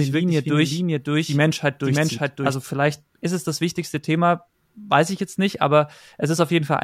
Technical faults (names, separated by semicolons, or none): doubled audio track